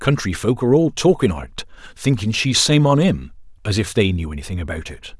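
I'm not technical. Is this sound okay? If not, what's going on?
Yes, this speech recording sounds fine. Nothing in it points to a technical problem you'd need to worry about.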